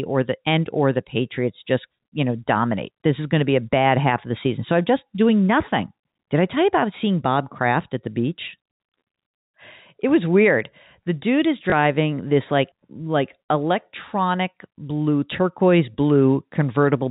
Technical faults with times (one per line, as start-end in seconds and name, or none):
11.70-11.72 packet loss with last packet repeated